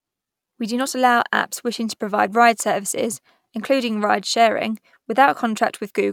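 No technical faults can be heard anywhere in this recording.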